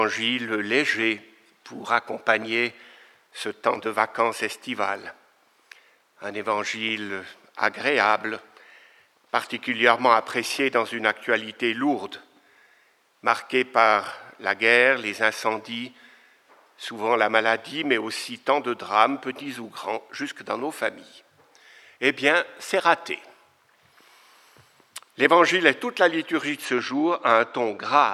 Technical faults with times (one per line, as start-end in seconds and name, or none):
26.65-28.13 channel delay (comb filtering)